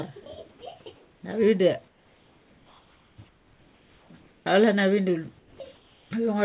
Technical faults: sound dropped by the voice detector; comfort noise in place of the background; onset clipped by the voice detector

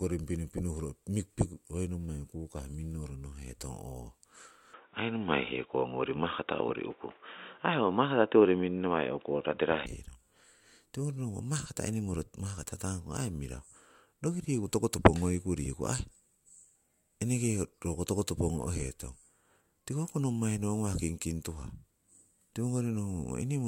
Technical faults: input switched to a poorer device

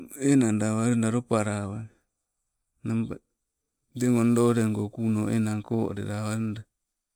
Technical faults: crude rate conversion

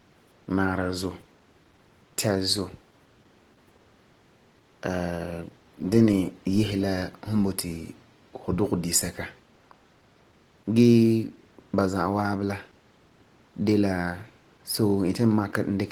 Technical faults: Opus compression

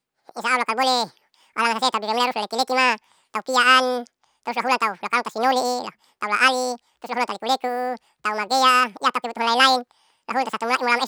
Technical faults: audio read two samples at a time (double speed)

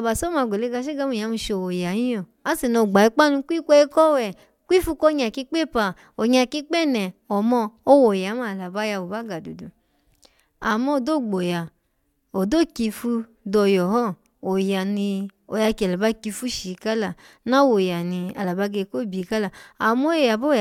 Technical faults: none

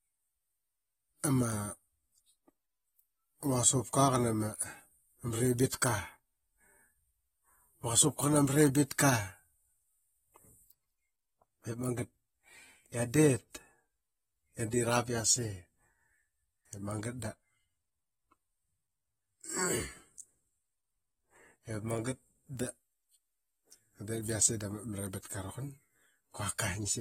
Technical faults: AAC compression

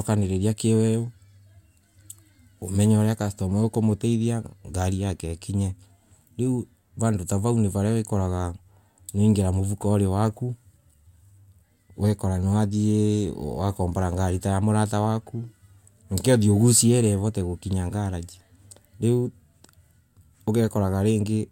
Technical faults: none

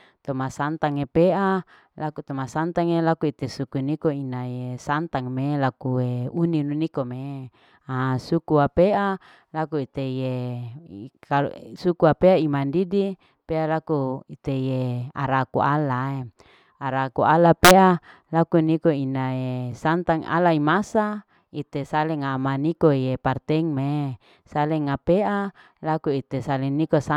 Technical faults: integer overflow

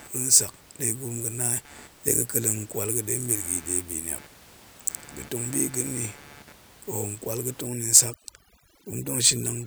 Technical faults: computer activity noise; overdone noise removal

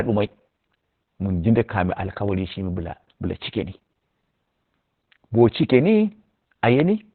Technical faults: Opus voice compression; bit error spike

